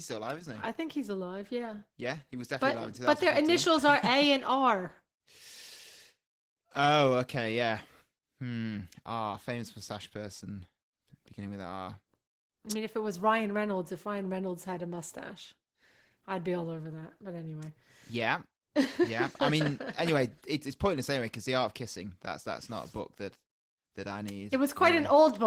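Opus voice compression runs throughout the speech. Its hybrid coding, with a linear-prediction layer below 8 kHz and a coarse transform layer above, sounds like roughly 16 kbps and leaves the speech audibly hoarse, slightly robotic and grainy.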